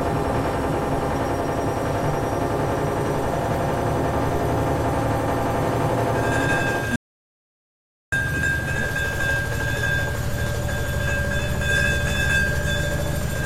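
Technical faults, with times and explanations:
6.96 to 8.12 s, audio dropout to silence: the sound cuts off mid-flow and returns about 1.16 s later, with the gap holding silence and no room tone underneath. The likely cause is a lost input, such as a disconnected device, a failed link or a stray mute, while recording carried on writing silence, so whatever sounded during that stretch is gone.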